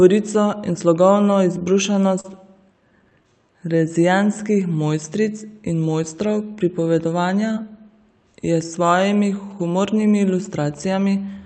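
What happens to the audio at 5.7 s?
Nothing goes wrong at 5.7 s: the speech continues intact there, carried through the call path's Opus coding with no dropout, glitch or distortion at that moment.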